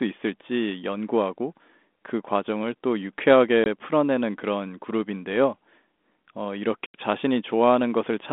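Packet loss on an ADPCM call at 3.64–3.67 s and 6.86–6.95 s leaves hard-edged silent holes of about 20 and 80 ms. The decoder's predictor and step size drift from the sender's, so speech resumes slightly distorted before it settles.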